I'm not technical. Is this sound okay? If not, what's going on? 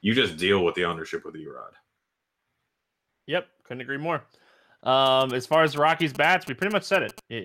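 No. From 5.06 to 7.2 s, GSM signalling bursts from a nearby mobile phone cause a galloping dit-dit-dit of short buzzes. Unlike steady mains hum, they come in stop-start clusters.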